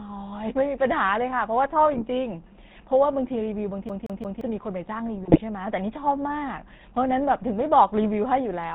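Throughout, the speech passes through the GSM full-rate codec, consistent with 13 kbps, which cuts everything above 4 kHz and thins the excitation, leaving a plainly audible buzzy, gravelly roughness. From 3.89 to 4.41 s, the CD is stuck on one turn: the laser jumps back repeatedly, replaying the same 174 ms snippet three times with a brief mute at each jump, a rapid, even stutter. From 5.24 to 5.40 s, GSM bit errors corrupt the decoder's filter, pitch and gain values across a stretch that fits about eight 20 ms frames, so the voice breaks into squawks, pops and gargling.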